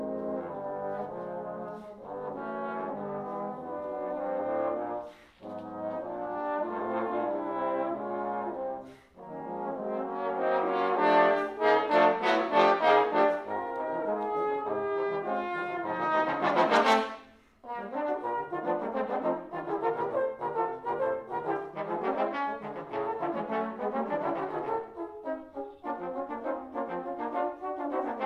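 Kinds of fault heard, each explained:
No kinds of fault are heard in this clip.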